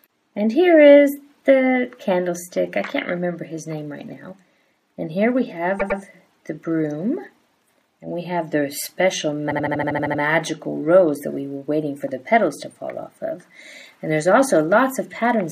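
A stutter at 5.79 s replays a 104.5 ms block twice more, adding 209 ms; at 9.50 s a 78.4 ms block loops nine extra times until 10.20 s, adding 705 ms. These are repeated frames: short runs of compressed frames, fitting four and three frames, were written more than once.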